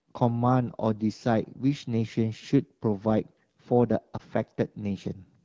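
A speech recording carried over an AMR wideband (HD Voice) link, with lost AMR speech frames between 4.17 and 4.21 s: a brief dip or warble where the decoder repeated the last good settings, which fits a single dropped 20 ms frame.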